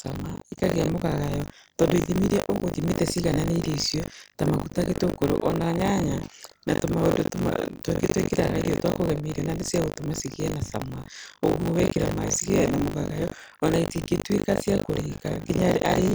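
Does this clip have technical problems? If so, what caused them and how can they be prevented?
Yes. A robotic 50 Hz buzz runs through the speech wherever there is sound. This is buffer tearing: the writer and hardware reader cross inside each 20 ms buffer, so about a fifth of it replays audio roughly 70 ms old. Keeping the writer safely ahead of the read pointer prevents it.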